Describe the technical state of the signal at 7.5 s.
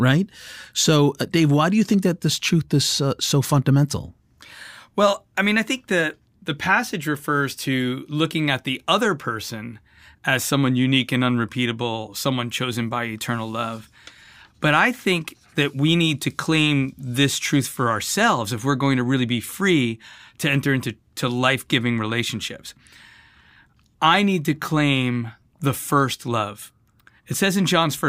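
At 7.5 s the speech signal is intact, with no audible fault present at that moment.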